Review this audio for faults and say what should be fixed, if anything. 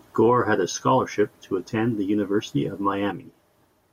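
At 3.12 s the speech drops abruptly by about 6 dB and stays down until the clip ends at 3.93 s. The drop is a clean step, not a fade. The likely cause is one channel dropping out of a stereo feed that is then summed to mono. Sound common to both sides loses half its contribution, hence the 6 dB step. Anything carried only by the lost side vanishes. To fix it, restore or rebuild the missing channel for that last stretch. Prevent it by checking both channel feeds and their connections for continuity before the mono fold-down.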